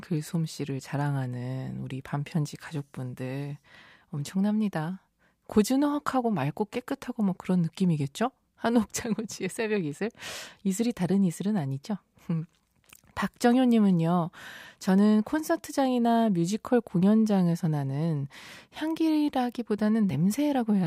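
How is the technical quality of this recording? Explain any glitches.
The recording has no technical glitches. Nothing in the audio needs explaining.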